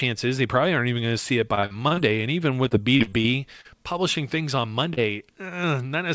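Repeated packet loss (robotic sound) breaks up this speech recording twice, from 1.55 to 2.01 s and again from 2.68 to 3.68 s. Within each stretch, audio packets kept arriving too late or not at all. The receiver covered each hole by stretching out the last sound it had, and the next dropout followed almost at once. In the first burst about a third of the time is patched sound, with holes up to 47 ms long. The second burst is longer but less dense, with about a fifth concealed and holes up to 38 ms. The result is choppy speech with fragments missing. Short concealed packet loss appears at 4.94 to 5.00 s. About 30 ms of audio failed to reach the decoder in time, was replaced by a continuation of the preceding sound, and then blended back into the real signal, leaving a brief smear. Throughout, the sound stops at 8 kHz, which fits a wideband call codec such as G.722.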